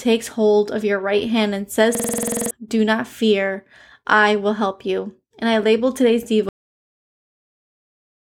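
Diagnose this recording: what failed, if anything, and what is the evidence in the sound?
The failure is a system hang loop at the driver or buffer stage. From 1.95 s to 2.51 s, one 46 ms slice of speech repeats exactly, twelve times. At 21.5 Hz the result is a rapid, rattling stutter. The driver stalled while the sound hardware kept replaying the same ring buffer. A 46 ms loop fits a 2048-sample buffer. New audio was not written during the stall, so roughly half a second of speech is gone.

The second failure is a cut-off end, also at the buffer or storage stage. At 6.49 s the speech stops mid-sound. It falls straight to digital silence, with no decay, and stays silent to the end. The final buffers were never written or played out. Whatever the talker said after that point was not captured. The abrupt drop from signal to silence is the evidence.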